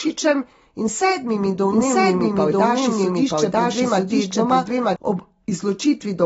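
AAC compression runs through the whole speech clip: nothing sounds above 7.6 kHz, and the dull, smeared top with a fizzy, warbling edge on sibilants fits a low-bitrate AAC-LC encode around 24 kbps. The encoder has likely discarded and roughly filled in bands it could not afford to code.

A doubled audio track appears from 1.70 s to 4.96 s: a second, full-band copy of the speech runs about a second behind the first and at about the same level. It has no reverb or room colour and starts and stops abruptly, likely from a second capture path or an edit holding two out-of-step copies.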